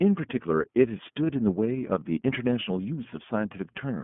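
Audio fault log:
Throughout: iLBC codec. The speech is confined to a telephone band of roughly 150 Hz to 3.4 kHz, with a plainly audible rough, slightly synthetic edge. A simple band-limit would leave the speech smooth, but here each block is coded on its own, so the speech comes out a little rough and synthetic. The 30 ms frame rhythm and the texture fit iLBC at about 13.33 kbps.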